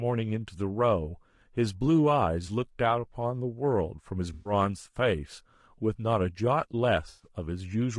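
Speech runs throughout with plainly audible codec damage: the voice is rough and grainy, with noise filling the gaps between pitch harmonics. This is the signature of low-delay AAC compression, most likely AAC-ELD at a rate around 32 kbps. Its short frames cannot separate closely spaced harmonics well, and at this rate too few bits remain to code the spectrum cleanly, so quantisation noise spreads across the band. Two brief dropouts show AAC frame loss with concealment, one from 4.33 to 4.53 s and another from 7.09 to 7.27 s. These are short losses of about 120 ms and 100 ms, consistent with runs of six and five 20 ms frames. In each gap the decoder rebuilds the missing audio from the last good spectrum, so the sound turns briefly smeared and noisy rather than dropping out to silence.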